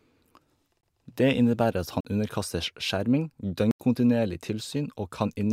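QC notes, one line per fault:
0.81–0.83 s, 2.01–2.05 s (after "innebærer at", before "underkastes skjerming"), 3.71–3.80 s (after "underkastes skjerming"): block of digital silence. The speech drops to silence for 21, 43 and 85 ms, lengths that fit 1024-, 2048- and 4096-sample buffers going unfilled. The waveform shows flat gaps, and the spectrogram shows blank vertical bands flanked by broadband edge lines.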